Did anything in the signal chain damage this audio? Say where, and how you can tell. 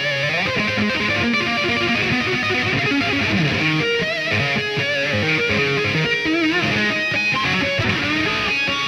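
No, no damage is audible.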